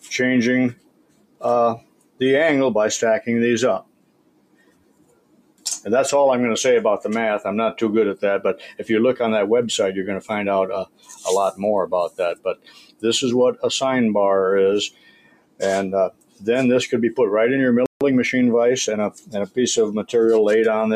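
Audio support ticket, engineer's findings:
Noise suppressor applied to music or sounds, whole clip. Speech-tuned suppressor active on non-speech material, misreading steady content and tails as noise. Gain rides up and down by roughly 20 dB, giving audible pumping and thinning as sustained parts sink while attacks pass.

Sound cut by the noise suppressor at 0.73–2.21 s, 3.81–5.65 s, 8.55–8.86 s, 10.85–13.63 s, 14.9–16.47 s and 19.10–20.12 s. Level drops of about 18–21 dB. Held and decaying sound pulled down, decays truncated, transients largely intact.

Playback stall at 17.86–18.01 s. Output goes silent mid-flow for about 150 ms, then resumes. Likely buffer underrun or a blocked audio thread in the player.

Time-compressed catch-up at 18.01–18.99 s, directly after the stall. Player drains its backlog by cutting out and cross-fading short segments, running at 1.15x speed. Pitch stays normal. 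Audio sounds hurried.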